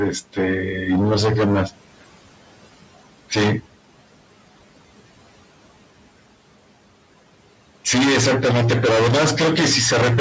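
A noise suppressor throughout this speech clip pulls steady background noise down by about 18 dB frame by frame, so the room noise sinks between words and swells back under them.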